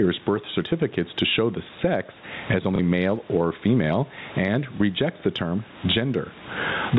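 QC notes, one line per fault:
throughout, gain pumping: The level breathes all the way through, with a swing of about 25 dB, so quiet and loud parts sit oddly close together and everything feels squashed. The likely cause is input gain set far too high, with a fast limiter or compressor clamping down on every peak and then letting go again.
2.76–2.79 s and 4.77–4.80 s, packet loss with last packet repeated: There are two small blips, each about 30 ms, which fits a single lost packet. The first comes between "show the sex as" and "male or female and", and the second between "male or female and" and "rejects the term". In each gap the receiver replayed the previous chunk. That replay doesn't line up with the waveform's cycle, giving a small blip under the G.711 telephone band.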